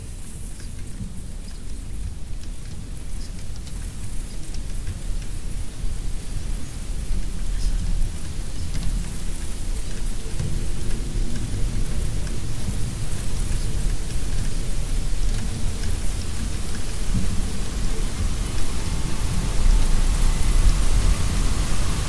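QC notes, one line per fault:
The signal holds steady in level and continuity throughout, with no audible technical problems.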